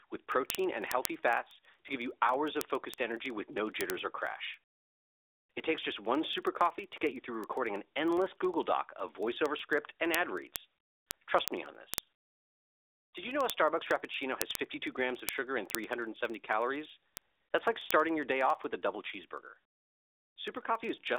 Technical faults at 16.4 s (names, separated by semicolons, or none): word clock ticks